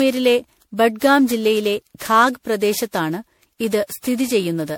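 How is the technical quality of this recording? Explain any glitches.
The recording is noticeably degraded, with one fault running through the whole clip.

Generation loss is present throughout. The speech has a swirly, hollow, smeared character, and consonant attacks sound blurred rather than crisp. That points to the audio having likely been decoded and re-encoded with a lossy codec such as MP3 around ten times, at a rate that fits roughly 96 kbit/s. Each pass requantises the signal on a shifted frame grid, so the noise and spectral gaps from every generation pile up. The result sounds worse than a single encode at that bitrate would.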